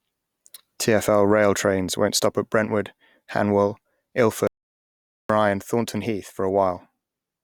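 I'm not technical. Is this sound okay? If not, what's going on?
No. An audio dropout to silence hits from 4.47 to 5.30 s: the speech stops dead for about 0.8 s, likely from a lost input connection.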